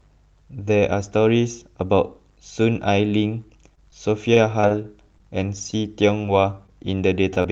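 From 3.75 to 6.70 s there are scattered short gaps. Around ten packets went missing or arrived late, each patched by continuing the last sound. Gaps run up to about 30 ms, giving brief ticks and smears.

At 7.34 to 7.38 s comes a short stall from a late packet. The jitter buffer ran dry, so the speech is held about 21 ms too long, then resumes.

At 7.42 to 7.46 s there is short concealed packet loss. About 20 ms never arrived and was filled by extending the preceding speech. It sounds like a quick wobble or smear.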